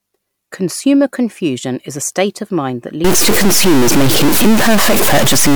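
Speech clip: from 3.04 s, right after "state of mind that", a harsh buzz sets in until the end, likely a stuck bit, offset near −5 dBFS. Waveform shows shifted, blocky steps; spectrogram fills with broadband noise.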